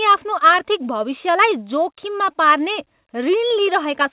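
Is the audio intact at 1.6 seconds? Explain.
Yes, the speech at 1.6 seconds is intact, with no fault at that moment beyond the narrow, telephone-like band of the call path, which carries nothing above 4 kHz.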